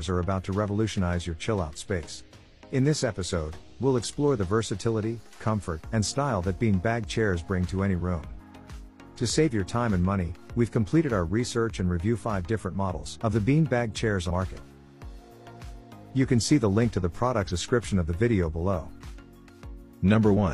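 Compressed frames skipped at 5.76, 8.36, 13.15, 14.26 and 17.47 s: whole blocks of encoded audio, which fit a 46.4 ms frame length, never reach playback. Each time the sound jumps ahead by roughly 100 to 200 ms.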